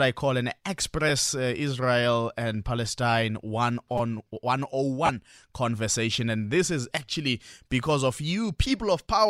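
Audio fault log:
1.09 s, lost LE Audio frames: a brief noisy smear after "I call an". The gap fits one lost 10 ms frame, filled by the LC3 decoder replaying the previous spectrum with scrambled signs.
3.98 to 4.00 s, repeated buffer: a short buzz as a roughly 5 ms slice plays four extra times with hard joins, repeating at about 200 Hz. Next to no audio is dropped.
5.06 to 5.09 s, lost LE Audio frames: a 30 ms noisy smear just before "conversation and this is". This fits three lost 10 ms frames, concealed by reusing the last spectrum with random signs.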